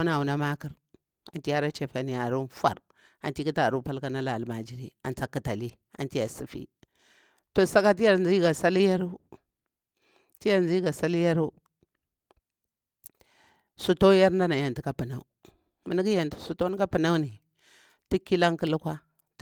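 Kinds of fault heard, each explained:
Lost packet rebuilt from error correction: at 1.55 s and 9.09–9.11 s, a lost 20 ms packet plays from its low-bitrate backup copy, so there's no gap, just briefly rougher, noisier speech.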